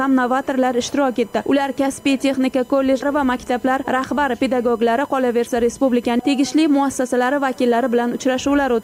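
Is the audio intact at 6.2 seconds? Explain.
No. Compressed frames are skipped at 6.19 s: the decoder never plays a run of frames, so the audio jumps ahead by roughly 150 ms, which fits about four 32 ms frames. The join is heard as a brief blip or click where the material on either side meets.

USB whine also runs through this moment. Current drawn by the USB bus in 1 ms frames leaks into the audio as a fixed-pitch whine built on 1 kHz. It is strongest at 16 kHz and about 30 dB below the signal.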